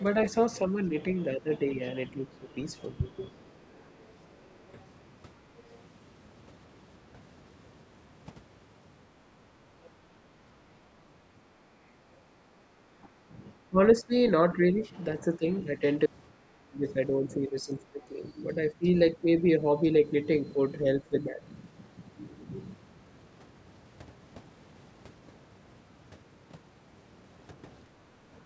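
Speech clip with echo-cancellation faults. The echo canceller likely failed to remove the loudspeaker signal, so the other side's voice is leaking through at 0.21–0.26 s (about 20 dB below the talker), 3.36–4.84 s (about 35 dB below) and 9.83–9.9 s (about 30 dB below). During double talk the canceller likely couldn't separate the two sides, so speech is suppressed: it dips by about 10 dB at 0.69–3.22 s, about 15 dB at 13.01–15.81 s, about 20 dB at 16.39–18.21 s and about 15 dB at 21.01–21.45 s. At 27.85–28.3 s the canceller clamped the microphone while the loudspeaker played, so the background is gated and the room sound drops by about 8 dB before returning.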